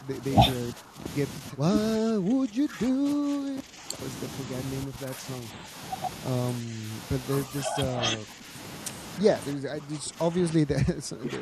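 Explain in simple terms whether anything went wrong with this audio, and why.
The speech keeps dipping and thinning out at 0–0.25, 0.72–1.06, 1.39–1.66, 1.97–3.98, 4.85–5.76, 6.61–7.06, 7.46–8.55 and 9.2 s to the end. This is speech suppressed in double talk, likely from an echo canceller turning down the talker while the other side spoke.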